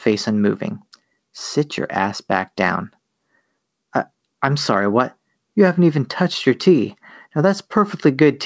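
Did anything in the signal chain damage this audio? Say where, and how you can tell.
No, nothing damaged this speech.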